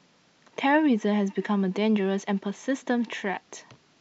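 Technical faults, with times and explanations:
Nothing technical gets in the way here; the speech just runs along with no dropouts, glitches or other trouble to point to.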